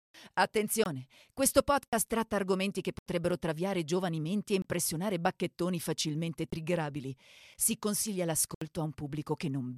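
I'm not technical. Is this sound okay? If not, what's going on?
No. The speech has blocks of digital silence, where the sound drops out completely and snaps back with no fade. They're at 0.84, 1.88, 2.99, 4.62, 6.50, 7.54 and 8.55 seconds, lasting from a tick to a short hole. The program likely couldn't keep up with the audio.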